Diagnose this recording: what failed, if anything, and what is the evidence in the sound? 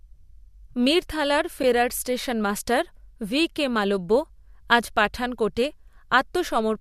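Network loss feeding the decoder: at about 1.63 s, just before "স্টেশনমাস্টার ভি কে মালব্য", the speech drops into a brief dip. That's AAC frame loss with muting. It fits one lost 10 ms frame, likely from an AAC-ELD stream. The decoder zeroed that frame, and the overlapping windows faded around it.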